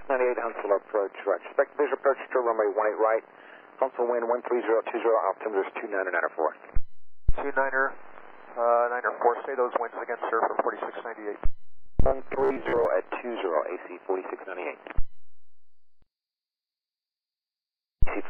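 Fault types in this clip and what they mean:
Robotic sound from repeated short buffers: from 11.77 to 12.85 s the sound turns into a rigid, metallic buzz locked near 66.8 Hz. The likely cause is starved playback looping the last stretch of about 15 ms, with roughly half the real audio skipped.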